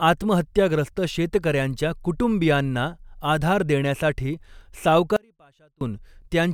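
From 5.17 to 5.81 s the speech abruptly vanishes for about 0.65 s, leaving only a faint leak roughly 35 dB below normal level before cutting back in. This audio dropout to a faint residue likely comes from the signal path briefly breaking while downstream stayed live.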